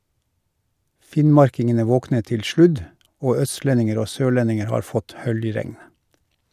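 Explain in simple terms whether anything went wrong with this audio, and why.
Nothing went wrong; the recording sounds as it should.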